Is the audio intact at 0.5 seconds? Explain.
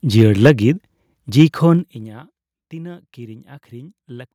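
No. At 0.5 s the sound is inside a stretch of microphone overload running from 0.17 to 0.51 s. The loudest peaks go about 3 dB past the converter's limit, so their tops are flattened, with a few percent of samples clipped. The cause is likely an input volume set too high for the converter. Squaring off the waveform adds a harsh, crackling grit to the strongest moments instead of a clean rise and fall.

Just before that point, at 0.47 s, there is a microphone volume step-down. The whole signal, background included, drops abruptly by about 2 dB in a single step rather than fading. The likely cause is the call software reacting to the distorted peaks by cutting the device's input gain at once. It is heard as a sudden small dip in loudness right at the end of the crackly passage.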